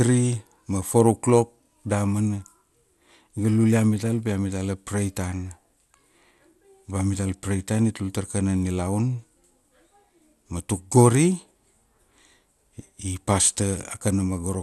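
From start to finish the speech sounds dull, with a gurgling, grainy roughness and nothing above 12.2 kHz. This is likely MP2 compression at a low bitrate, which fits about 80 kbps: upper sub-bands drop out and the remaining bands are coarsely quantised.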